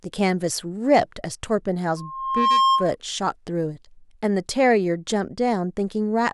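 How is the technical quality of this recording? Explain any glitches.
The recording has one clear glitch. From 1.96 to 2.96 s, loudspeaker feedback squeal: a 1.1 kHz tone swells over about half a second to several dB above the speech. The microphone is re-amplifying its own loudspeaker. This growth, unlike a steady interference whine, marks it as feedback.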